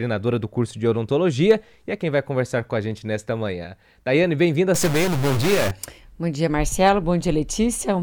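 From 4.74 s to 5.71 s the sound turns harsh and buzzy. This is a stuck bit, most likely a single data bit held at a fixed value by a broken line or converter. About half the samples land off by that bit's weight, in a pattern that tracks the waveform. The error step sits at about -20 dBFS. Quiet moments in this span fill with a gritty noise instead of falling silent.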